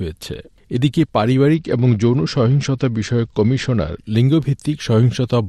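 Bluetooth SBC bit pool drop, 1.54 to 3.99 s: a lower bit pool starves the top sub-bands and coarsens the rest, dulling treble, adding grit.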